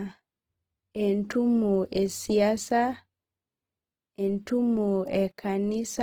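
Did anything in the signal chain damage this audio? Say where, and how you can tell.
Yes. Opus compression runs through the whole clip, from start to end, and sits at the codec stage. The speech sounds rough and grainy, with a noisy texture where it should be clean, though the top end stays open to about 20.1 kHz rather than going muffled. That points to the music (CELT) mode running short of bits, likely at a low rate near 16 kbps, so bands are filled by folding or noise instead of being left empty.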